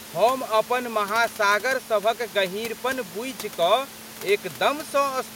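Nothing goes wrong in this speech recording; the only thing underneath it is some low room noise sitting about 20 dB below the talking, which is just the space the microphone was in.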